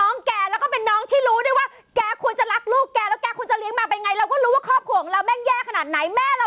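Gain pumping runs through the whole of this speech clip: the gain swings by around 10 dB, pulling down under each loud syllable, likely from gain set far too high feeding a fast limiter, squashing the level range of the narrowband call audio.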